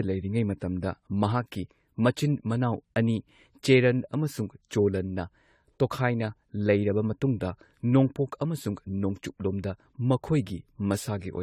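From start to finish the speech has a swirly, hollow quality: consonant attacks are blurred, the tone is smeared, and nothing is present above about 17.1 kHz. This is generation loss, most likely from the audio being decoded and re-encoded repeatedly with AAC-LC, which fits a bitrate near 64 kbit/s and something like seven passes. Each new encode quantised the signal on a shifted frame grid, so the noise and spectral gaps kept compounding.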